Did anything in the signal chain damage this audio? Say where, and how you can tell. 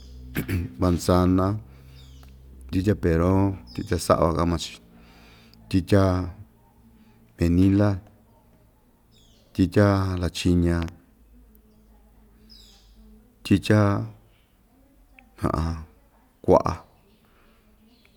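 Yes, one spot. Right after "tyitya lachiña", around 10.82 to 10.90 s, there's a loud pop, really two sharp thumps back to back, standing roughly 10 dB above the speech, which carries on underneath. That's a step or spike of voltage landing on the signal and getting shaped by whatever follows it. It likely happened on the analogue side, probably a connector being plugged or a switch being flipped mid-recording.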